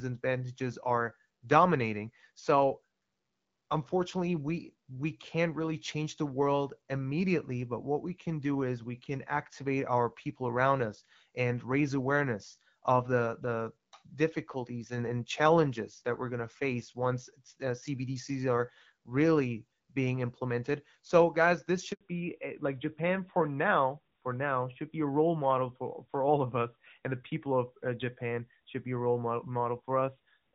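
At 21.93 s, just after "implemented so guys this", the call is passed from one network to another, and no speech frames arrive during the switch. The result is a handover gap: the speech cuts to silence for about 80 ms, until 22.01 s, and whatever was said in that moment is lost.

From 22.01 s to the end, the call falls back from the wideband HD Voice codec to an older narrowband one, which fits AMR-NB at 12.2 kbit/s. In this fallback to narrowband, everything above 4 kHz disappears, so the speech suddenly sounds duller, thinner and rougher than the clearer wideband stretch before it.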